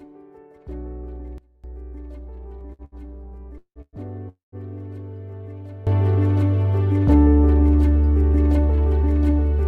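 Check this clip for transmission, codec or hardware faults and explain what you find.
The clip has three kinds of fault: two sudden gain jumps, two short stalls from late packets, and three call audio freezes.

A sudden gain jump at 1.38 s drops the level by about 22 dB until 1.64 s, where it returns. A second jump at 5.87 s raises the level by about 19 dB and holds to the end. The sound and the background noise change level together, in a single step with no fade. The likely cause is a digital gain change applied between two samples without a ramp.

Two short stalls from late packets occur at 2.73–2.82 s and 2.85–2.95 s. In each, a packet missed its playout time and the jitter buffer ran dry. The receiver stretched the last sound for about 60 ms and then about 71 ms, and resumed where it left off, so nothing is lost. The sound is held unnaturally long with a faint buzzy smear, and the two stalls come in quick succession.

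Call audio freezes occur at 3.58–3.79 s, 3.82–3.96 s and 4.29–4.55 s, filling about 177 ms, 112 ms and 235 ms. Each begins as a decaying continuation of the last sound and then drops to silence for about 70 ms, 40 ms and 130 ms. Playback resumes from the point where it stopped, so these are inserted gaps with nothing missing. The likely cause is packets held up in transit long enough to empty the jitter buffer.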